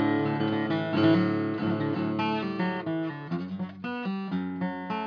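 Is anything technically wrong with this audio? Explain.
No, nothing is technically wrong with this audio.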